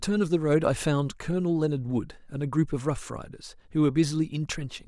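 Nothing in the speech stood out as a technical problem on listening.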